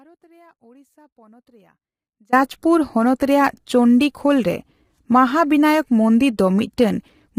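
From the start until 2.33 s an audio dropout to a faint residue is already under way: the signal is missing and only a faint leak far below normal level remains, likely a lost feed while the path stayed live. Throughout, the speech sounds rough and grainy, with noise between harmonics and a thin, synthetic top band. This points to heavy low-delay AAC compression, likely AAC-ELD at a low bitrate around 24 kbps.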